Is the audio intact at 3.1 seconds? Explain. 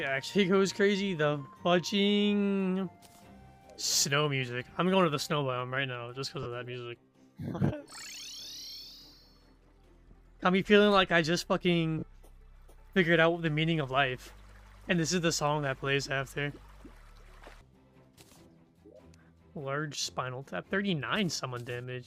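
Yes, the audio is intact at 3.1 seconds, with no dropout, click or other fault at that moment.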